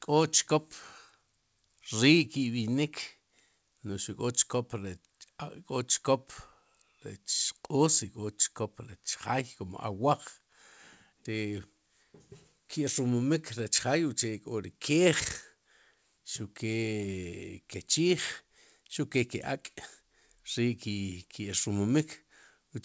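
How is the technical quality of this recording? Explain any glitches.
The technical quality of this speech recording holds up, with no glitches to explain.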